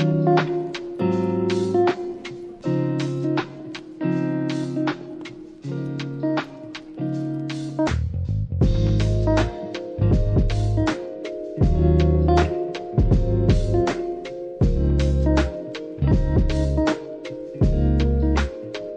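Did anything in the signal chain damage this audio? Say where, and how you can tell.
No, the signal chain did no damage.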